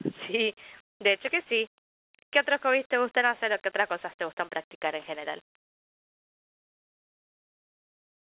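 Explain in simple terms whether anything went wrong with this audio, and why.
Nothing went wrong with this audio, so there is nothing to explain.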